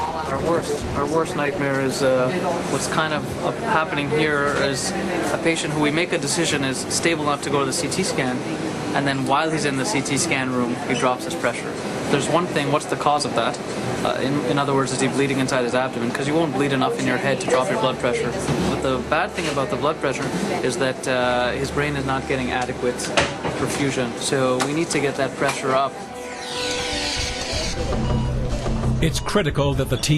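From 0.0 to 2.0 s the audio is dull and smeared, with the treble thin or replaced by a hissy synthetic sheen and heavy codec artefacts. At 2.0 s it snaps to better quality with no gap or glitch. This is an adaptive stream starting at a low bitrate. The player began on a cheap rendition, which fits Opus at about 16 kbit/s, then stepped up to one like 64 kbit/s once it had measured the connection. Unlike a network dropout or rebuffer, nothing stalls or repeats, and the poor quality is confined to the opening.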